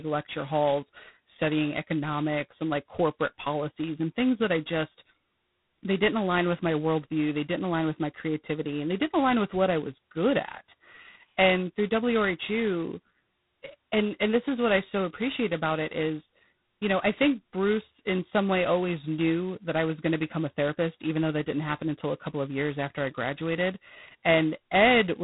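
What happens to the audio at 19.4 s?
G.726 ADPCM coding damage is present at 19.4 s, as it is throughout the whole clip. The coder sends only a small difference between each sample and an adaptive prediction, and the heavy, rasping hiss that rises and falls with the speech level points to 16 kbit/s, just 2 bits a sample, where prediction errors are coarsely rounded. The band also stops at about 3.9 kHz, so the speech sounds dull and narrow.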